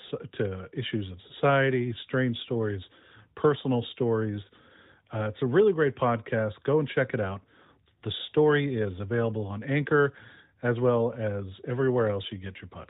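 No technical faults turn up anywhere in the speech, which arrives through an AMR narrowband mobile codec whose light coding character and band limit at 4 kHz fit its highest-rate mode of about 12.2 kbps.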